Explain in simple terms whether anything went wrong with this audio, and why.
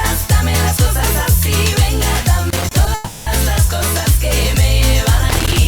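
Two things go wrong here. First, there is loose connector crackle from 2.50 to 2.71 s, and again from 5.29 s to the very end. It sounds like scratchy, uneven popping. A worn or dirty plug contact keeps cutting in and out, chopping the sound.

Second, there is a call audio freeze from 2.94 to 3.28 s. The last bit of sound is stretched into a fading buzz for about a third of a second. Then the audio picks up where it stopped, so nothing is lost, just delayed. The likely cause is network packets arriving late, leaving the receiver nothing to play.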